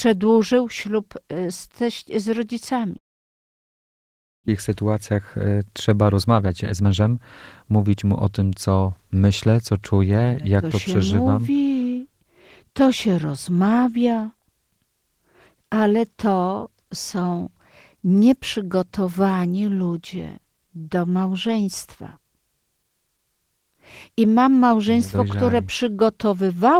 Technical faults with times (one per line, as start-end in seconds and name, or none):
2.97-4.50 long network dropout
5.11-5.60 jitter buffer speed-up
6.12-7.11 jitter buffer speed-up
7.63-8.90 jitter buffer speed-up